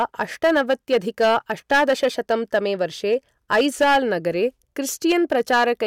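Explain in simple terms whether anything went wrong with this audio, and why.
Yes, something went wrong: the whole recording has hard clipping. The speech was pushed too loud for some stage in the chain to handle, so the tops of the loudest moments got sliced off flat. Only a few percent of the sound actually hits that ceiling, but it happens all the way through, so every strong syllable picks up a gritty, crackly edge instead of sounding clean.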